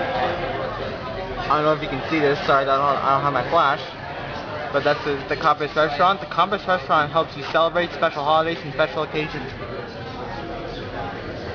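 Aliasing runs through the whole clip. The audio was resampled down without an anti-aliasing filter, which fits a drop from 48 kHz to about 11 kHz sampling. Content above the 5.5 kHz fold point has reflected back into the band as unrelated tones, sitting roughly 20 dB below the main signal and giving high-frequency detail a gritty, metallic edge. On a spectrogram, energy runs hard up to 5.5 kHz, with mirrored, inverted-slope traces that fall as the original frequencies rise.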